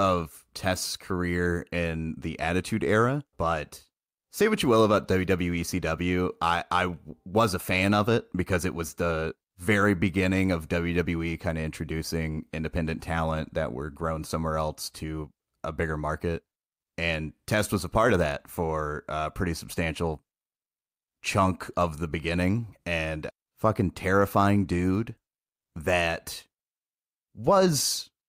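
Speech, with no technical faults audible anywhere in the recording.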